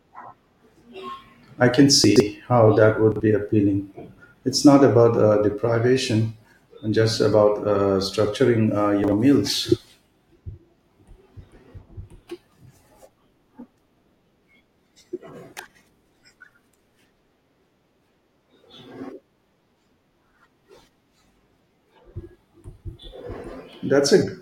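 Brief jumbled stumbles in the speech at 2.04 to 2.2 s, 3.12 to 3.2 s and 9.04 to 9.12 s are chunks out of order. The audio moves in 40 ms pieces, and in each spot one piece plays late: three chunks late at 2.04 s, one chunk late at the other two. No sound is missing, but the misplaced piece creates three abrupt joins, heard as a garbled moment.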